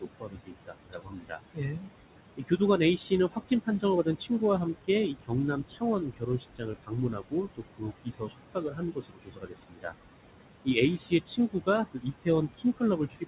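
Throughout the clip, the background swells up under the speech and drains away in the pauses. These are noise suppressor artifacts: the suppressor pulls down, frame by frame, whatever bands it judges to be steady noise, here by about 21 dB. What it is working against is ordinary room noise about 10 dB below the speech, heard through a band that stops at 4 kHz, which fits a G.711 mu-law call path.

In five stretches the speech itself sounds swallowed, with soft consonants and word endings fading out: 0.01 to 1.89 s, 2.37 to 2.61 s, 2.98 to 4.42 s, 4.73 to 9.94 s, and 10.64 s to the end. This is speech cut by the noise suppressor. It mistook parts of the voice for noise and lowered them along with the background, by about 17 to 22 dB at the deepest points. The first stretch loses about a second in total, and the 4.73 to 9.94 s stretch roughly three seconds in total.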